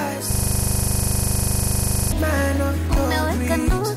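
From 0.31 s to 2.12 s the sound locks into a hard, rattling stutter: one 40 ms sliver of audio repeats exactly, about 45 times in a row, giving a rapid machine-gun pulse at 25 Hz. This is a system hang loop. The computer or its audio driver stopped supplying new samples, so the sound hardware kept replaying the last stretch of its ring buffer, whose length fits that 40 ms cycle.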